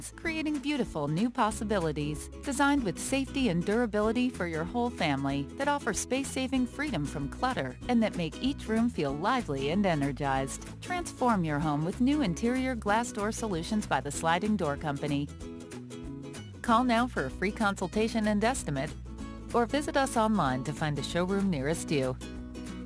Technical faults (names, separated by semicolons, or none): aliasing